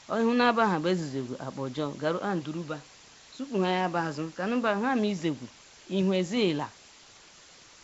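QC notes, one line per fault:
Throughout: low bit depth with dither. A constant, even hiss sits under the speech and never pumps or distorts. The level fits about 7 bits with dither added before rounding, which turns rounding error into steady white noise around 20 dB below the signal. On a spectrogram this is a uniform grey wash across all frequencies up to 7.7 kHz, including the pauses. On the waveform the silent stretches show a thick, fuzzy band of noise instead of a flat line.
Throughout: Nellymoser compression. The speech has a rough, hissy halo and a smeared, underwater quality, and nothing is present above 7.7 kHz. The likely cause is the Nellymoser Asao codec at a rate that fits a 32 kbps stream. It codes short blocks with very few bits, so weak bands get no bits and are refilled with noise. On a spectrogram this shows as a hard ceiling at 7.7 kHz, with blotchy, speckled patches between harmonics and blurred edges on each syllable.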